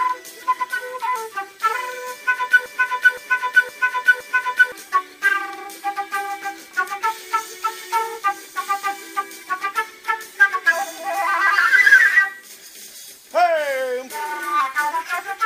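From 2.66 s to 4.72 s, a 515 ms fragment repeats exactly four times back to back: a broken-record loop. The player, encoder or stream likely stalled and kept resending the last fragment it held, so the audio due in that span is lost.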